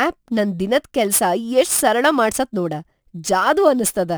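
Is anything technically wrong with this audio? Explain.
Yes. Throughout the speech there is a gritty, inharmonic fizz riding on the louder and brighter sounds, sitting roughly 20 dB below the speech itself. This is crude rate conversion. Samples were simply dropped or repeated to reach the new rate, with no filtering, and the pattern fits a 48 kHz to 44.1 kHz change. That irregular skipping produces shifted, inharmonic copies of the speech, which is why the buzz tracks loud and sibilant moments.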